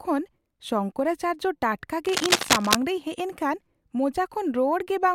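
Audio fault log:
2.05–2.75 s, cable scratch noise. Dense, ragged crackle rides over the speech at roughly its own loudness. Likely a worn connector moving, its contact resistance fluctuating rapidly.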